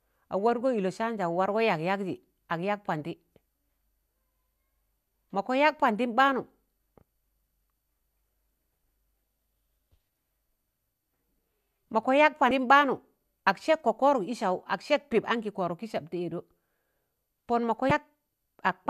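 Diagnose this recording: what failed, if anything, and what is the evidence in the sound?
The fault lies in the codec stage: damaged data in a compressed stream. Two 30 ms bursts at 12.48–12.51 s and 17.88–17.91 s come from corrupted frames that the decoder misreads until it resyncs. Unlike a network dropout, these come from damaged data in the stream rather than lost packets.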